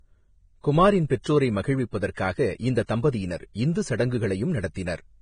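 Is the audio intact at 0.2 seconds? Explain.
No. Vorbis compression affects the whole clip, including 0.2 s: the speech has nothing above 9.7 kHz and hissy, grainy treble. Heavy damage like this is likely from a Vorbis encode at a low bitrate near 23 kbps, where coarse treble quantisation turns fine detail into noise.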